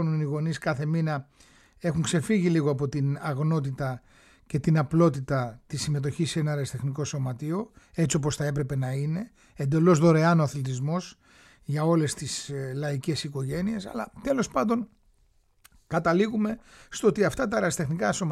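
No technical faults can be heard anywhere in the recording, which comes across as an intact signal with no interruptions, dropouts or added disturbances.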